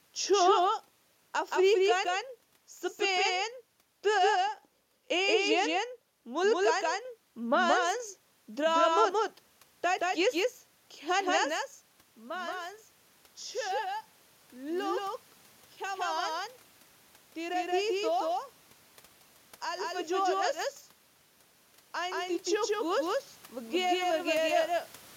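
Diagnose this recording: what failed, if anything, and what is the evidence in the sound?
The speech has a doubled audio track all the way through: a second, full-band copy trails roughly a fifth of a second behind, at about the same level, with no room colour. The likely cause is the signal being captured twice at the driver or buffer stage, once through a slower path.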